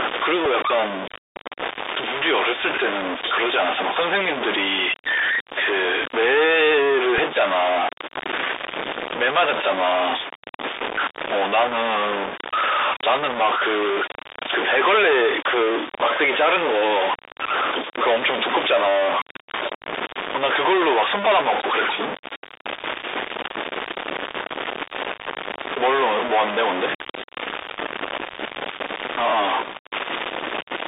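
From start to finish a distortion sits on the speech and fills the pauses with noise, most likely a stuck bit; the waveform shows a constant offset-like jaggedness even in silence. Throughout, the Bluetooth CVSD headset codec at 64 kbps limits the band to roughly 300 Hz to 3.7 kHz, adding scratchy sibilants and granular hiss; the spectrogram is empty above 3.7 kHz. At 0.45 s and again at 7.18 s, a Bluetooth headset packet repeated replaces about 3.8 ms of audio with a copy of the previous packet, giving a small tick and a brief vertical smear.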